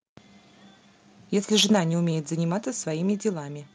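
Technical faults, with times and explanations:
1.54–1.75 s, microphone overload. The loudest speech turns harsh and crackly here. Peaks run about 6 dB past the converter's limit, and a few percent of samples are flattened. The likely cause is an input level set too high, so the converter cuts off the waveform tops.
1.73 s, microphone volume stepped down. Near the end of the distorted peak, the level drops by about 3 dB in one step. Voice and background fall together. This is likely the call software lowering the device input after sensing clipping.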